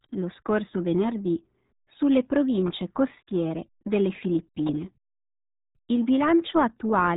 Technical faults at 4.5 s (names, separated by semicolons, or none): RealAudio 14.4 codec